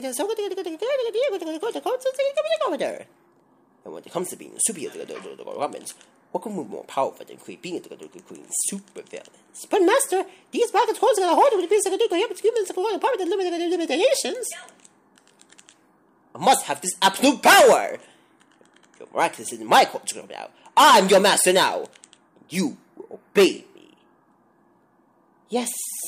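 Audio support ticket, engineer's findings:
No faults found on listening; the signal path shows no audible defect requiring action.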